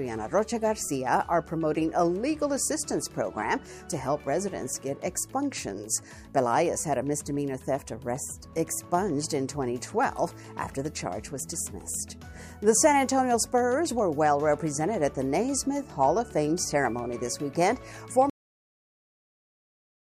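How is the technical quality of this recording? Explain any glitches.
The recording has one clear glitch, a cut-off end. At 18.30 s the audio stops abruptly mid-sound and falls straight to digital silence for the final 1.8 s, with no natural decay. The last buffers were never written or played back, so the sound is severed rather than finishing.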